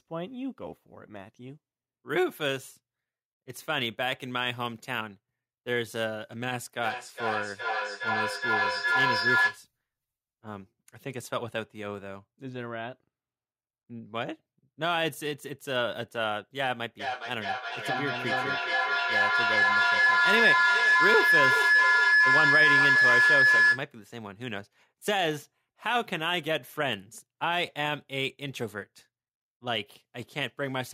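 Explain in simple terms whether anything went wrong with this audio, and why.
Feedback howl at 6.77 to 9.67 s and 16.99 to 23.92 s: sound loops between a nearby microphone and loudspeaker, growing each pass into a high whine pulsing roughly every 0.4 s.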